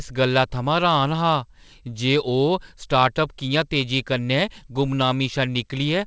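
No audible technical faults.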